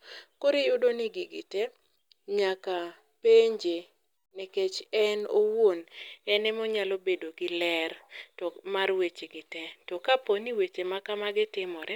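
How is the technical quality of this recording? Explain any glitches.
The technical quality of this recording is sound, with no glitches to explain.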